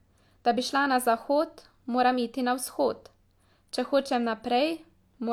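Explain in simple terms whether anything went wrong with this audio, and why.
Nothing went wrong with this speech recording. Listening all the way along, there is no technical fault to point to at any moment.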